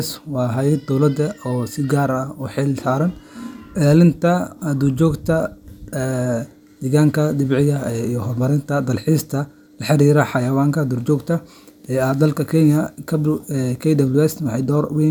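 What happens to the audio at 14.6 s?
Nothing goes wrong at 14.6 s; the speech there is intact, with no dropout, click, distortion or other fault.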